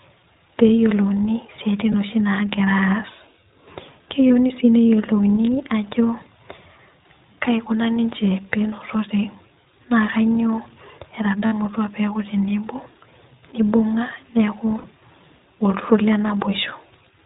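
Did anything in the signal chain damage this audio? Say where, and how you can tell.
Yes, in two places: the codec and the network.

The speech is plainly damaged by the iLBC codec throughout. It sounds boxed-in and dull, with nothing above 4 kHz, and has a rough, slightly synthetic edge. iLBC is a narrowband VoIP codec, and this version codes each 20 ms frame's excitation independently of the one before, which fits its 15.2 kbps mode. At that rate the fine detail of the excitation is coarsened, and that is where the grittiness comes from.

Four short gaps are filled with a held, faintly buzzy, breathy vowel where the speech should move on. These are lost iLBC frames, damaged in the network stage. Two are brief, at about 1.92 to 1.95 s and 4.28 to 4.32 s, each covering 20 ms. Two are longer, about 60 ms each: 11.46 to 11.53 s, just before "peeku tenebo", and 14.78 to 14.86 s, just after "nibung'a neeku". 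In each case the decoder repeated the last pitch cycle mixed with noise. Because iLBC frames stand alone, the speech recovers almost immediately afterwards.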